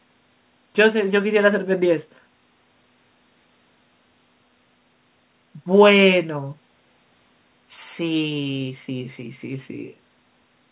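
No faults can be heard in this speech; it carries the narrowband sound of a telephone-grade call path, with nothing above 4 kHz and the lowest bass trimmed by the call's microphone processing, both normal for such a link.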